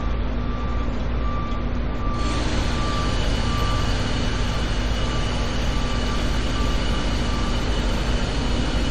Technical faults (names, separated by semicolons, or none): generation loss